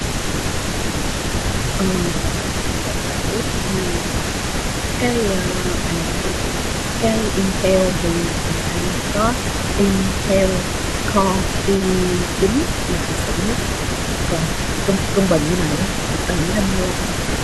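A faint second copy of the speech trails the original by 315 ms throughout the clip, sitting about 15 dB below it. This is an echo leak: on a loudspeaker end of the call, the echo canceller likely failed to remove everything its microphone picked up from the far side, and the residue was sent back as a delayed repeat.

In seven places the speech briefly sags by about 5 dB: 2.21 to 3.21 s, 3.99 to 4.04 s, 5.62 to 6.18 s, 8.29 to 8.98 s, 12.99 to 13.36 s, 14.29 to 14.62 s, and 16.94 to 16.99 s. This is speech suppressed in double talk. When both ends spoke at once, the echo canceller likely could not tell the local talker from the returning echo and turned both down together.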